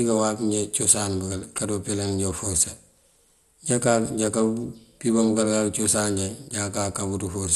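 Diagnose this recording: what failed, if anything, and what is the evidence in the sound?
Codec stage: throughout the speech nothing exists above 12.2 kHz, and the rest sounds dull, gurgling and granular, pointing to MP2 compression, likely at around 64 kbps. Starved sub-bands switch off or quantise coarsely; a spectrogram shows a hard ceiling over flickering band blocks.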